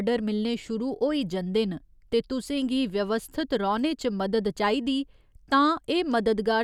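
No technical faults occur anywhere in this speech recording, so there is nothing to describe in time order.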